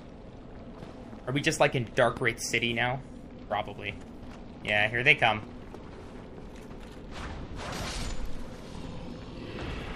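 At 2.17 to 2.19 s a single sharp loud pop, roughly 10 dB above the sound, cuts through; likely a brief electrical voltage spike entering the signal chain.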